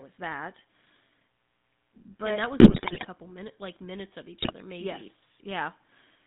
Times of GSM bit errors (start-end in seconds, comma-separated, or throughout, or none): 2.60-3.07, 4.42-4.54